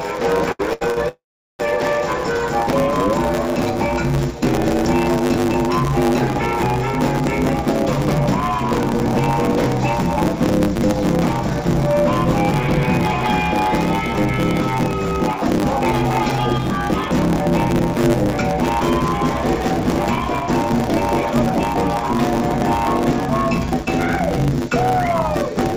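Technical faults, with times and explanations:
Throughout: block size mismatch (truncated). One stage hands over longer blocks than the next stage takes in, and the tail of each block is discarded. The regular cut points produce a buzz at 100 Hz, and because part of every block is lost the audio runs 1.16 times faster while keeping roughly its normal pitch. The block rate fits 512-sample blocks being written. Above 8 kHz there is nothing, as expected from the G.722 call codec at what sounds like 64 kbps.
0.52 to 0.98 s: repeated stalls (stutter). Three separate waits occur in under half a second, the longest 101 ms, and together they fill 281 ms, about half of the span. Each time the incoming audio ran out, the receiver stretched the last sound to bridge the wait, then resumed. Nothing is lost, but the passage drags and stutters as the flow repeatedly stops and restarts.
1.08 to 1.61 s: call audio freeze. 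The audio halts and a continuation of the last sound fills the wait, fading to near silence for about 450 ms of a 585 ms fill. Packets were likely held up in transit, emptying the jitter buffer. When delivery resumes the audio carries on from where it stopped, so nothing is missing, but a gap is inserted and everything after it sits 585 ms later.
9.91 to 15.82 s, 17.47 to 22.18 s and 23.74 to 25.48 s: jitter buffer speed-up. The receiver holds more audio than it wants and trims the surplus by removing many short pitch-period pieces in succession. The first two stretches run 2 percent fast, removing roughly 150 ms and 100 ms. The last runs 6 percent fast, removing roughly 150 ms in under two seconds, so it sounds noticeably hurried while pitch stays unchanged.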